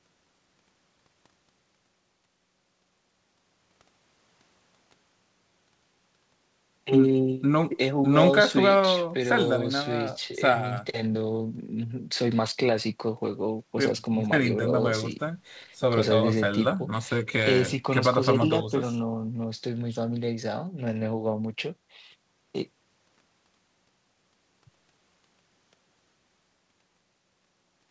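No technical faults can be heard in this speech clip. It carries the sound of a call path: nothing reaches above 8 kHz, which fits a wideband codec such as G.722 at 64 kbps.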